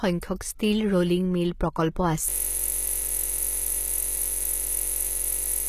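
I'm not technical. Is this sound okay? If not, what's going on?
No. Throughout, the audio carries plainly audible compression damage with nothing above 14.9 kHz, and the likely cause is HE-AAC compression, which keeps only the lower frequencies and fakes the treble by copying lower bands upward, so the top end does not match the original.

From 2.30 s to the end, a system hang loop takes over: the computer froze while the sound hardware kept replaying the same 21.33 ms snippet, about 160 times, producing a steady buzz at roughly 47 Hz.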